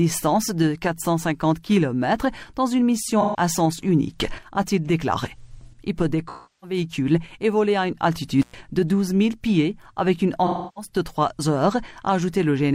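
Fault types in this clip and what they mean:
AAC frame loss with concealment: Pieces of the compressed stream went missing, and the decoder filled each gap by reusing the last good spectrum instead of going silent. Three such patches occur, at 3.21 to 3.40 s, 6.28 to 6.77 s and 10.46 to 10.89 s. The first is brief, about 128 ms of lost audio. The other two are longer, about 341 ms and 299 ms.
intermittent contact: A loose plug or cable briefly broke the signal connection. At 8.42 s the sound cuts out for about 105 ms, returning at 8.54 s. A crackle marks the moment the contact opens and again when it closes. In between, only faint hiss remains. That hiss comes from the electronics after the break, which keep running while the incoming signal is disconnected.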